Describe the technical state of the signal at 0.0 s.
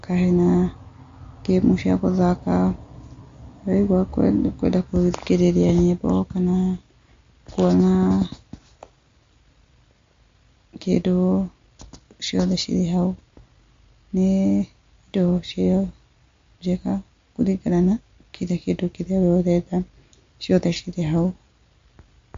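At 0.0 s the speech already carries damage that runs through the whole clip. Nothing is present above 7.2 kHz, so the treble stops at a hard ceiling. The cause is likely MP3 compression. Short of bits, the encoder drops the top band and zeroes weak frequency lines, which flicker on and off from frame to frame. That gives a watery, swirling texture and smeared attacks, which fits a low bitrate of around 48 kbps.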